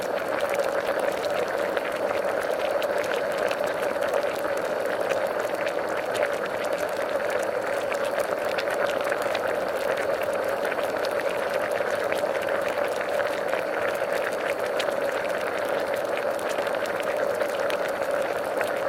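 No technical faults can be heard at any point in this recording of sounds.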